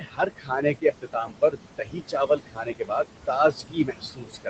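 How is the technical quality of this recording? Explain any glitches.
Noise suppressor artifacts run through the whole clip. The suppressor pulls bands it judges to be steady noise down by about 21 dB, frame by frame. The room noise, only about 8 dB under the speech, sinks in gaps and rises under speech.

Speech cut by the noise suppressor occurs from 0.0 to 3.07 s and again from 3.51 s to the end. The suppressor misreads quieter speech as noise and drops it by up to about 21 dB. Roughly two seconds in the first stretch sound swallowed or faint. The Opus call path limits the top end to 8 kHz.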